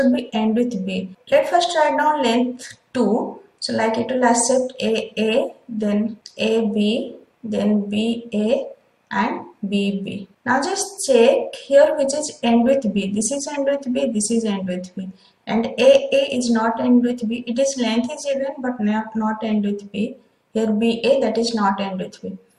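A brief chirp-like burst of noise, peaking at roughly -20 dBFS, cuts in from 13.54 to 13.56 s. This is a corrupt frame decoded: flipped bits in compressed data were played anyway, misplacing energy across frequencies for about 24 ms, which points to a few damaged frames.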